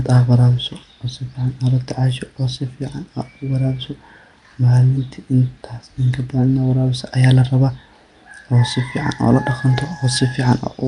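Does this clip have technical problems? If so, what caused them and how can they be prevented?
Yes. Throughout, the speech has a rough, hissy, underwater smear, likely from Nellymoser compression (Flash's Nellymoser Asao codec), which fits a rate near 44 kbps. Starved of bits, weak bands are filled with noise, so a spectrogram shows speckled fill and nothing above 10.6 kHz. Capturing with Opus, AAC or uncompressed PCM instead prevents it.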